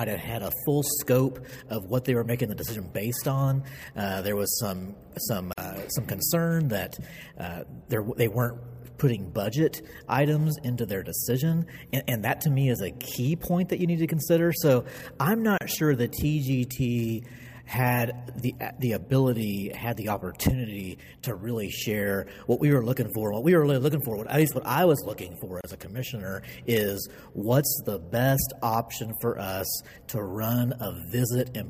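Three short dropouts, 47 ms at 5.53 s and 31 ms at 15.58 s and 25.61 s, are gaps at joins of encoded pieces: separately encoded 10-second segments were spliced without trimming encoder delay and padding. Each shows as a thin vertical blank band with smeared edges.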